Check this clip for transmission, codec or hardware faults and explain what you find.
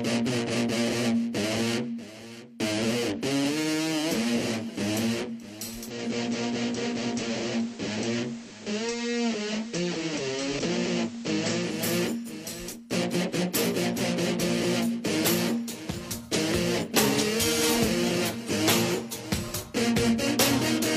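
One fault: from 5.73 to 11.97 s the receiver falls back from digital to FM, blending over about 0.42 s. Level drops about 2 dB, and hiss sits roughly 20 dB down.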